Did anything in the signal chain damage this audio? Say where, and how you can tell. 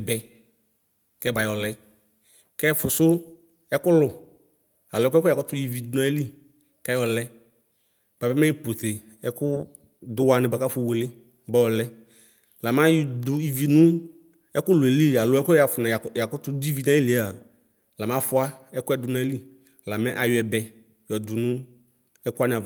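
No, nothing in the signal chain damaged this audio.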